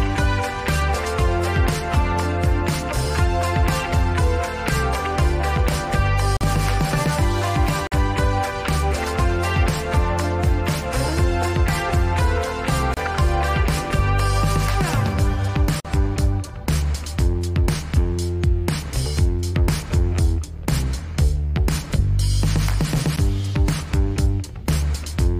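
At 6.37, 7.87, 12.94, 15.80 and 23.16 s the sound drops into a block of digital silence, 12 to 46 ms long, most likely where the output buffer went unfilled. The 46 ms gaps fit a 2048-sample buffer. Each cuts out and back with a hard edge, giving short holes and, at 23.16 s, a tick.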